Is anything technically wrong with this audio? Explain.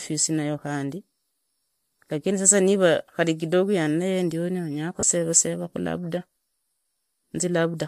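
Yes. From 5.00 to 5.03 s the speech briefly turns into a short, noisy smear lasting 30 ms. These are lost LE Audio frames: the decoder covered the gap by replaying the last spectrum with randomised signs, which fits three missing 10 ms frames.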